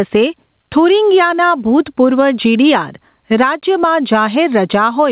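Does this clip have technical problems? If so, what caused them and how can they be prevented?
Yes. Gain pumping runs throughout: the gain ducks around 10 dB under loud speech. Likely cause: input gain set far too high, with a fast limiter clamping each peak. Prevent it by lowering microphone gain so the limiter rarely engages. The narrowband tone, with nothing above 4 kHz, fits a G.711 call path.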